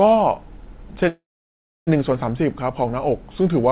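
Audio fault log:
1.08–1.89 s, call audio freeze: a brief fading buzz, then about 0.65 s of silence; likely packets held up and the jitter buffer ran dry, so audio resumes late.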